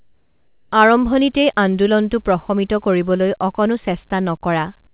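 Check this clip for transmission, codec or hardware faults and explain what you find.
One fault stands out, at the very start of the speech. From 0.00 to 0.72 s the background is replaced by comfort noise, ending just before "আৰম্ভণিতেই আন্দোলনটো প্ৰশমিত". The likely cause is discontinuous transmission. The sender's voice detector heard no speech and stopped sending real audio. The receiver then filled the gap with synthetic noise. It sounds like a flat, featureless hiss, about 7 dB quieter than the true background, which sits about 42 dB below the loud parts. The real background texture only returns when speech begins. Across the clip nothing is heard above 4 kHz, which fits a G.711 telephone codec.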